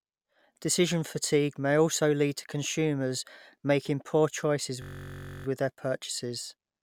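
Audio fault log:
4.82–5.46 s, system hang loop: after "consumers making poor choices", playback froze and the hardware kept replaying one 21.33 ms slice, about 30 times, which fits a 1024-sample buffer. Because the slice is so short, the repeats fuse into a steady buzz at 46.9 Hz rather than a stutter. On a spectrogram this shows as evenly spaced horizontal lines at multiples of about 47 Hz. The waveform shows identical 21 ms cycles. Speech resumes at "with their" with essentially nothing skipped.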